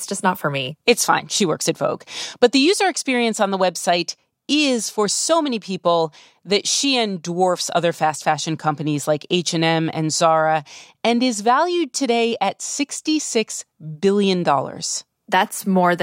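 No technical faults are audible anywhere in the speech recording.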